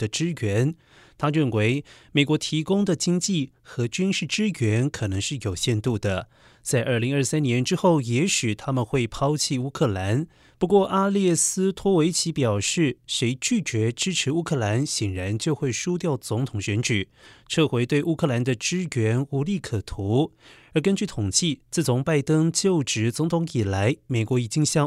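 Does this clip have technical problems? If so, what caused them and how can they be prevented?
No, there are no technical problems to point to in this recording. With nothing gone wrong, there is no cause to trace and nothing that needs preventing.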